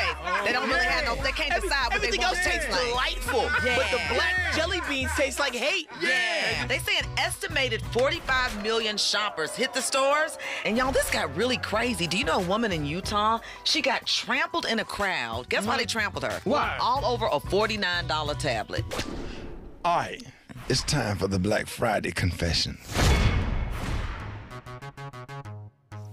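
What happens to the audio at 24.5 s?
Nothing goes wrong at 24.5 s; the audio there is intact, with no dropout, click, distortion or other fault.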